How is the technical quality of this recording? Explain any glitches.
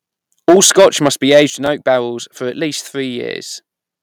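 The recording has three kinds of fault, all within the first two seconds of the speech.

Microphone overload runs from 0.48 to 1.42 s, just before "in oak barrels for". The peaks go about 8 dB past the converter's ceiling, most likely from excessive input gain, so around one sample in twenty is flattened, giving the loudest syllables a harsh, crackly edge.

Microphone volume stepped down occurs twice: about 2 dB at 0.5 s, then about 7 dB at 1.5 s, right before "in oak barrels for". The call software likely reacted to the clipping by cutting input gain, so the voice and background drop abruptly.

A repeated buffer appears at 1.66 s, just before "oak barrels for". When fresh audio arrived late, the previous 10.67 ms chunk, which fits a 512-sample buffer, was played once more. It is heard as a brief click or buzz with a hard seam.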